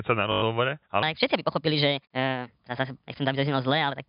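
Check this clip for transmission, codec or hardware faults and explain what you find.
Two faults stand out, heard through a telephone-band channel that stops at 4 kHz.

From 0.32 to 0.42 s there is a brief robotic stutter, a buzz lasting 100 ms. This is packet loss with the last packet repeated: the receiver looped its final good packet, which fits five 20 ms packets, and the repeats buzz at a 50 Hz rate.

From 1.03 s to the end, the sound turns high and hurried, running 1.34 times too fast and pitched about five semitones up. This section at the wrong speed is likely caused by playback or editing against the wrong clock, shifting speed and pitch together.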